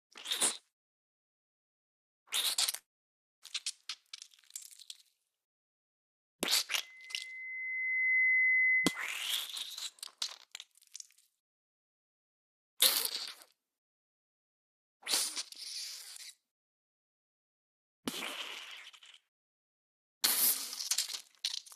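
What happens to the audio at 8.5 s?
At 8.5 s a loudspeaker feedback squeal is sounding. It runs from 6.81 to 9.14 s and swells over roughly a second and a half to about 10 dB above the sound. A microphone is re-amplifying its own loudspeaker, so a 2 kHz tone builds on itself. On a spectrogram it shows as a single bright horizontal line at 2 kHz, and the waveform envelope grows steadily.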